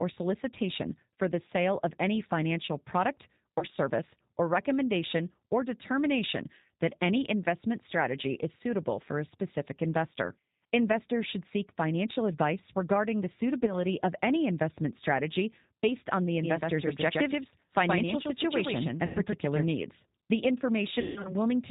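The whole clip carries plainly audible G.729 codec damage at 8 kbit/s. Nothing above 4 kHz survives. The speech sounds rough and slightly synthetic.

VoIP packet loss concealed by the speech codec appears four times. At 3.59 to 3.66 s and 13.65 to 13.79 s, 30 ms of audio is missing, about one packet each time. At 19.06 to 19.19 s, 90 ms is lost. From 21.01 to 21.35 s, 180 ms is lost in scattered gaps, the longest run 150 ms. Each time the decoder stretches the last sound into a fading buzzy tone or coloured noise. Recovery stays weak briefly afterwards.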